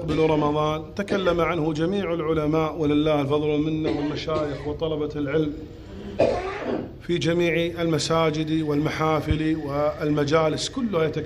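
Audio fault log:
No faults heard anywhere in the audio.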